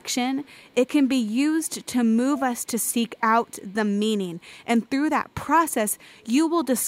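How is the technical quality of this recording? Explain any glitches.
The recording is marred by an echo leak: a faint copy of the speech trails about a quarter-second behind, at 0–1.28 s, 1.62–1.86 s, 2.36–3.7 s, 4.4–4.66 s, 5.29–5.34 s and 5.71–6.27 s. The copy is delayed 242 ms. It is loudest at 2.36–3.7 s (about 20 dB below the speech) and elsewhere sits around 35–40 dB down. The likely cause is a loudspeaker at the far end whose echo canceller let some of the returned sound through.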